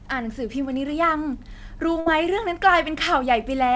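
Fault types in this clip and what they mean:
Burst of packet loss: consecutive packets failed to arrive in time from 2.00 to 2.09 s, so the receiver stretched the last sound for about 59 ms while fading it down, then jumped ahead, leaving roughly 60 ms of speech missing.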